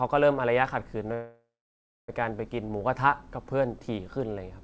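Speech over a call line, band-limited with nothing above 8 kHz, which fits a G.722 path at 64 kbps. The fault is a call audio freeze from 1.14 to 2.10 s. Packets were likely held up in transit, draining the jitter buffer, so the receiver stretched the last sound into a fading tail that drops to silence for roughly the final 0.64 s of the gap. When the audio resumes it picks up exactly where it stopped, so nothing's lost, but everything after runs about 0.94 s late.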